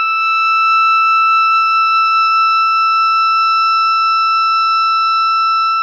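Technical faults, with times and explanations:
No technical faults can be heard in this music recording; the signal stays continuous throughout.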